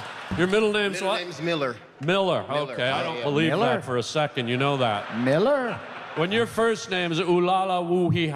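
From 1.32 s to the end the sound turns dull and muffled, about 8 dB down at 10 kHz: de-emphasis applied wrongly, a treble cut with no matching pre-emphasis.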